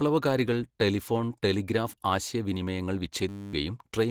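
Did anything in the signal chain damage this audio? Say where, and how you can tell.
Yes, in two places. At the codec stage, the whole clip has a hoarse, muffled and grainy quality, with rough, noisy texture where the voice should be clean. This is likely Opus compression working in its hybrid speech mode at a low bitrate, around 16 kbps. The band still reaches full bandwidth, but too few bits are spread across it, so detail is replaced by noise fill and the voice turns rasping.

At the driver or buffer stage, there is a system hang loop from 3.29 to 3.53 s, just after "ടെലിഫോൺ ടെലിഗ്രാഫ് ആശയവിനിമയങ്ങൾ". The host stalled while the audio hardware kept replaying the same 10 ms stretch of its ring buffer, about two dozen times. That exact repetition is heard as a steady buzz at 100 Hz in place of the voice. Roughly a fifth of a second of real audio is lost, and the sound resumes afterward.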